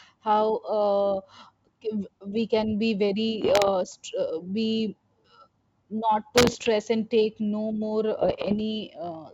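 Bit errors on an ADPCM link show up three times in this speech clip, over a wideband G.722 path: 3.42 to 3.69 s right after "we can be", 6.36 to 6.69 s just before "and take no more", and 8.20 to 8.60 s right after "and take no more". Each flipped bit knocks the decoder's step size and predictor off track, so you get pops and rough, gritty bursts with brief level jumps. The middle burst has an error rate of a couple of percent, against around 1 percent for the others.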